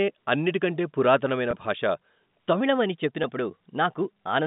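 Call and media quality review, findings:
Packet loss with pitch repetition: 1.51–1.53 s and 3.23 s, brief buzzy hold on the speech. Receiver concealment repeats last pitch period over about 20 ms, then 10 ms, consistent with two lost packets, then one. No dropout to silence.

Section at wrong speed: 2.61 s to end, speech 1.12x fast and about two semitones high, pitch and tempo shifting together, unlike the flat concealment buzz. Likely cause: playback or edit clocked wrong.

G.711 A-law path audible as 150 Hz–3.7 kHz telephone band.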